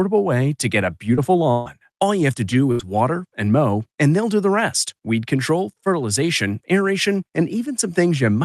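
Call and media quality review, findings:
Choppy speech from 1.15 to 2.81 s, with three holes (the longest 144 ms) and about 240 ms of sound missing. Repeated packet loss (robotic sound): the call decoder patched each lost stretch by extending the preceding sound before the next dropout arrived.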